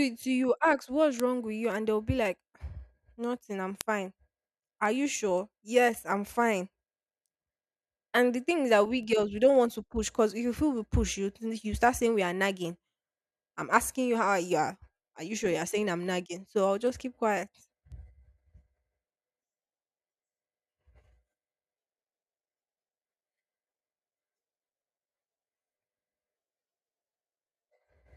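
A receiving device running on its own clock, unlocked from the digital source and off by roughly 40 parts per million, drops or repeats one sample about every half second. The result is word clock ticks from 0.15 s to 27.85 s, some fifty sharp clicks at a steady rate under the speech.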